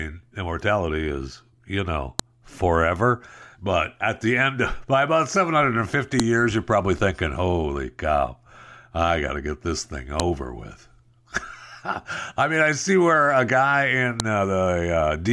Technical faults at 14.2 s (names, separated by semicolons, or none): file header played as audio